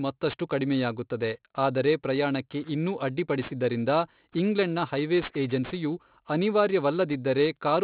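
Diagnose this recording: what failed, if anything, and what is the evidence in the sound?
The failure is aliasing at the sample-format conversion stage: the speech was resampled from a rate consistent with 44.1 kHz down to one consistent with 8 kHz with no anti-alias filter, so everything above 4 kHz folded back into the band. Throughout the clip the sibilants sound gritty and metallic, with the folded energy roughly 20 dB below the signal. On a spectrogram the content runs hard up to 4 kHz with mirrored, inharmonic streaks below it.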